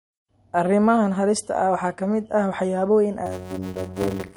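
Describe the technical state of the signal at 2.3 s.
At 2.3 s the speech carries MP3 compression damage, present across the whole clip rather than at that moment alone. Short of bits, the encoder has zeroed weak frequency lines, which drop in and out between frames, giving a watery, swirly texture with metallic edges on s sounds and softened attacks. The damage is plainly audible and is likely from low-bitrate MP3 encoding, consistent with 47 kbps.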